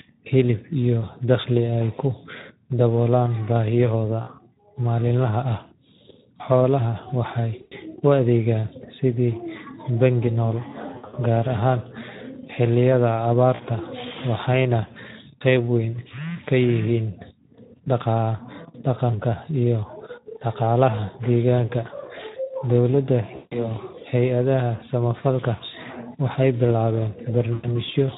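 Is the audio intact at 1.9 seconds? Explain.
No. At 1.9 seconds, like the rest of the speech, it carries plainly audible Speex codec damage. The sound points to a low-to-middle setting around 11 kbps, where this CELP coder has too few bits for the excitation, so the speech comes out noisy and hoarse.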